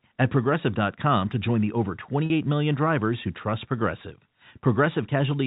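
At 2.26 to 2.30 s, between "to join the over" and "million drivers who trust", about 40 ms of audio went missing, which fits two 20 ms packets, and the receiver covered the gap with packet loss concealment by pitch repetition. It recycled the last pitch period, so the speech briefly holds on a slightly buzzy, sustained tone before resuming, all over the narrow G.711 telephone band.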